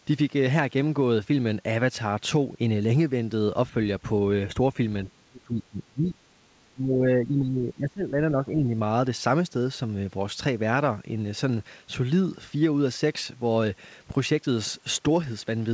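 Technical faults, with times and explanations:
5.04 to 6.18 s and 6.72 to 8.7 s, speech suppressed in double talk: the speech dips hard, down by about 20 to 25 dB at worst. That's likely the echo canceller mistaking it for loudspeaker echo while the far side talked and ducking it. The call codec's top end stops around 8 kHz, which fits G.722.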